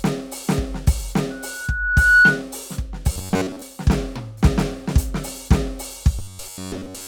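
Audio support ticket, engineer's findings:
Loudspeaker feedback squeal, 1.30–2.43 s: 1.5 kHz tone swells over about a second to about 10 dB above the music. Mic–speaker loop gain above unity. Spectrogram: single brightening horizontal line.

Robotic sound from repeated short buffers, 3.13–3.63 s and 6.19–7.07 s: metallic 93.8 Hz buzz over the music. Likely buffer underrun; about 10.7 ms segments looped, most of the audio replaced. Waveform: identical repeating cycles; spectrogram: harmonic comb.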